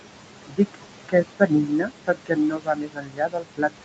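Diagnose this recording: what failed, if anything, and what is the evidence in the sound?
Noise suppressor artifacts from call processing: the background drops about 18 dB between phrases and rises again under the speech as the suppressor works frame by frame.

Speech cut by the noise suppressor at 0.47–0.78 s, 1.08–1.51 s and from 1.67 s onward: softer speech is mistaken for noise and drops about 19 dB, sounding swallowed.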